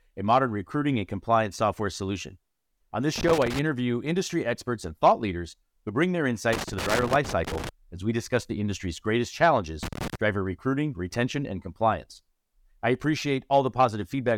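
Loose connector crackle breaks through at 3.16–3.59 s, 6.53–7.69 s and 9.83–10.15 s: a worn contact intermittently chops the speech, producing irregular scratchy bursts.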